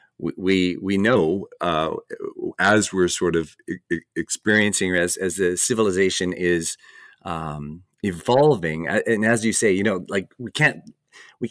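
From 1.16 to 4.48 s the speech shows a wrong sample rate fault: it runs at 0.919 speed and drops about 1.5 semitones, which fits 24 kHz audio played at 22 kHz. Unlike a pitch shift or time-stretch, pitch and tempo fall together.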